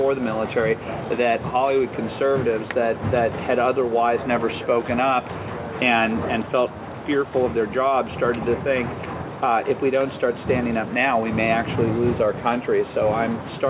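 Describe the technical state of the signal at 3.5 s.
At 3.5 s the audio is intact, with no dropout, glitch or distortion, only the narrowband character of the call path, which leaves nothing above 4 kHz and fits G.711 mu-law coding at 64 kbps.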